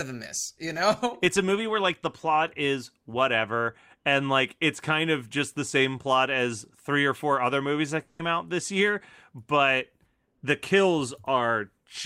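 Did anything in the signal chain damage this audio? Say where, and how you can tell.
Yes. At the network stage, a long network dropout likely cut the incoming stream between 8.01 and 8.21 s, so about 180 ms of the speech never reached the player. The receiver filled that gap by carrying the last sound forward as a buzzy, hissy continuation that fades rather than going dead, with no stretch of true silence. When the stream resumes at 8.21 s, the speech picks up further on, and the lost portion is simply absent.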